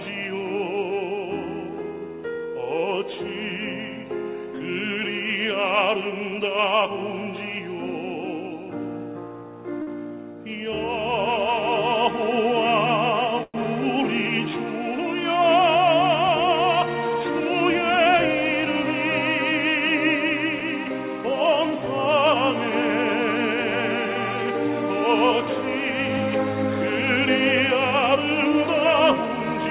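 A short stall from a late packet sits at 9.82 s, lasting about 49 ms. The next packet arrived after its playout time and the jitter buffer ran dry, so the receiver stretched the last bit of sound until that packet landed and then carried on from the same point. Nothing is dropped, but that sound is held slightly too long and the delay grows by 49 ms.

A call audio freeze runs from 13.43 to 13.65 s. The sound stops moving forward, and a fill of roughly 106 ms is inserted, including about 20 ms of near silence. The likely cause is packets held up in transit, which emptied the jitter buffer until they arrived. The audio then resumes where it left off, adding a gap with nothing lost.

A jitter buffer speed-up follows from 15.54 to 18.83 s. The buffer was holding more audio than its target, so the receiver trimmed many tiny pitch-period-sized slices, around 70 ms in all. Playback runs at 102% speed with unchanged pitch, a stretch that stays below the point where it sounds hurried.

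Throughout, nothing reaches above 4 kHz on the call path, which fits G.711 mu-law at 64 kbps.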